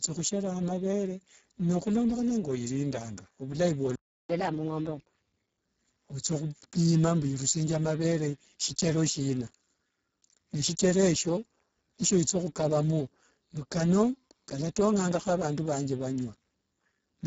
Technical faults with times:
0.00-17.26 Speex codec
3.95-4.29 playback stall
4.29-5.65 catch-up at higher speed

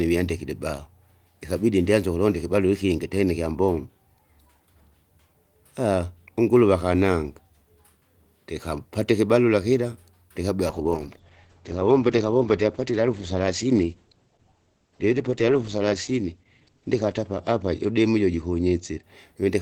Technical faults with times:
10.69-19.61 call bitrate drop

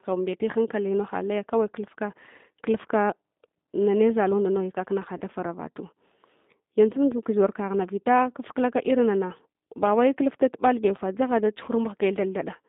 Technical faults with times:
0.00-12.68 G.729 codec
5.18-5.22 VoIP packet loss concealed by the speech codec
11.65-11.70 VoIP packet loss concealed by the speech codec

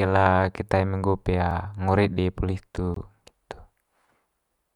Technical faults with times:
1.51 block of digital silence
2.94-2.96 block of digital silence

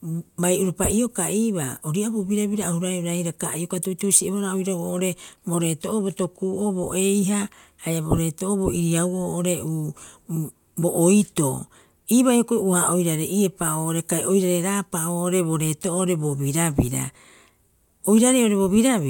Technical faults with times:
none

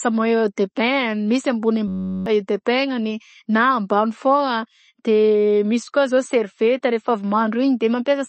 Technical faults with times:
0.00-8.29 MP3 compression
1.88-2.26 system hang loop

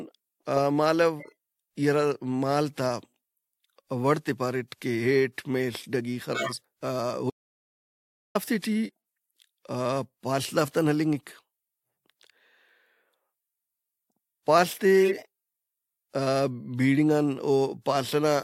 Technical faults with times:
1.19-1.32 corrupt frame decoded
6.34-6.52 corrupt frame decoded
7.30-8.35 audio dropout to silence

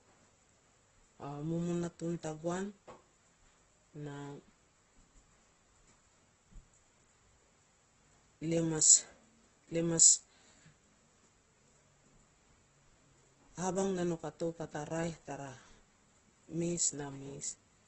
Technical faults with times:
0.00-17.87 Opus compression

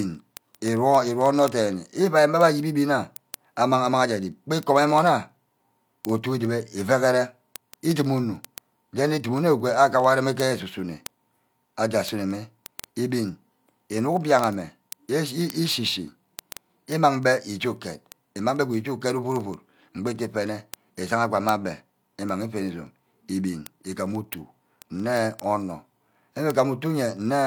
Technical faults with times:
0.10-27.44 word clock ticks

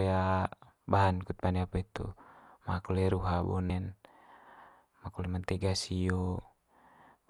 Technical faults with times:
3.69 damaged data in a compressed stream

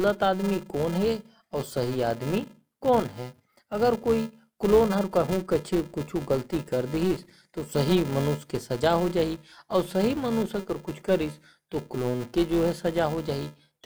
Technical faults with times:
0.00-13.86 filter restarted on every block

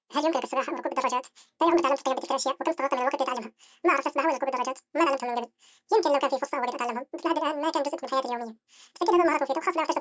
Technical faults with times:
0.00-10.01 wrong sample rate

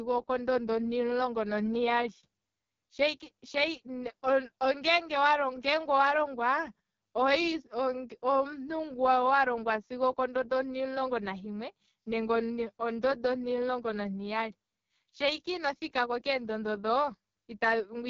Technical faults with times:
0.00-18.09 AMR wideband (HD Voice) codec

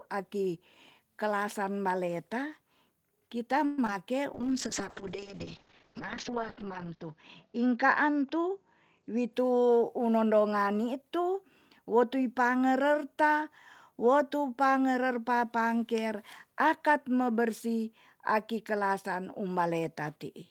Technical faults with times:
3.65-3.79 call audio freeze
3.85-3.89 short concealed packet loss
4.35-9.39 call bitrate drop
8.98-10.20 jitter buffer speed-up

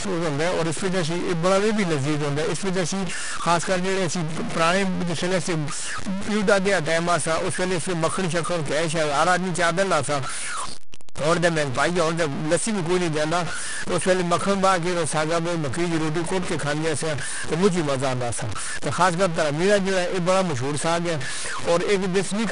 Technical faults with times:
0.00-22.52 stuck bit
0.00-22.52 4-bit ADPCM compression

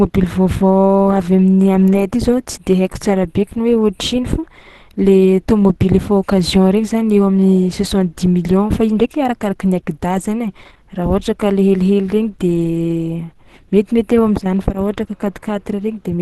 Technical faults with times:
0.00-16.22 Opus compression

